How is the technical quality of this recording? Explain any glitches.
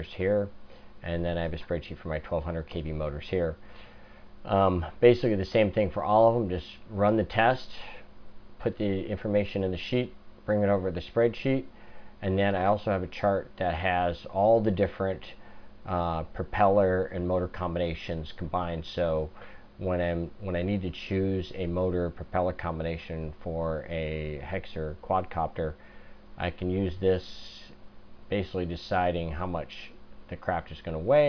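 Nothing stood out as a glitch or technical problem on listening.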